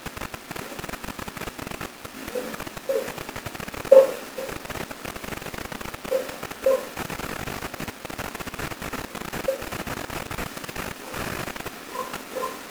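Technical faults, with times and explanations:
No technical faults can be heard anywhere in the speech recording; the signal stays continuous and steady in level from beginning to end.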